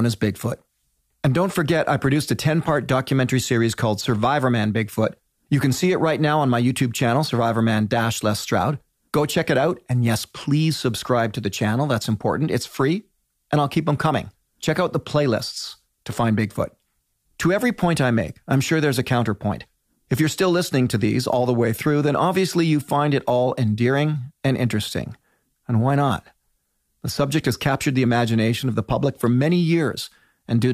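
Nothing stood out on listening to the speech in this recording.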